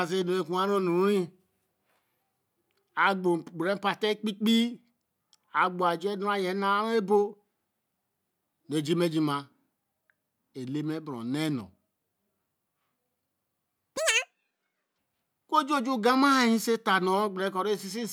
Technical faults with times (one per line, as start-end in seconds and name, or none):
13.97-14.98 audio read two samples at a time (double speed)